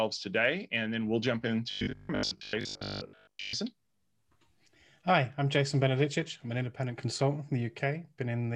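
From 1.71 to 3.53 s the speech turns into a rigid, metallic buzz pitched at 50 Hz that only loosely tracks the talking: robotic sound from repeated short buffers. It is likely caused by audio arriving too seldom, so most of this stretch is filled by looping the last 20 ms of sound.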